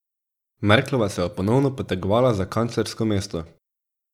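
Speech with one brief fault: just after "ponovno potegovala za kanclersko", from 3.41 s to 3.46 s, one channel drops out. The level dips by about 6 dB for 50 ms and then returns, likely because one side of a stereo feed went silent before the mono sum, halving whatever both channels shared. On a waveform this shows as a short, square-edged notch in the envelope; a spectrogram shows a thin vertical band uniformly darker across all frequencies.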